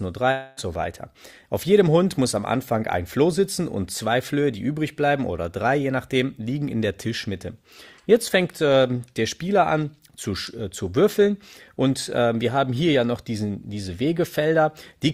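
At 0.31 s the audio breaks off and the receiver covers the gap by stretching the last sound into a buzzy, fading tail that runs to 0.59 s. This is likely a long network dropout: about 260 ms of audio never arrived, and the concealment filled nearly all of it, so no true silence opens up. Unlike a brief packet loss, the fill lasts long enough to audibly decay, and the sound resumes with that stretch simply missing.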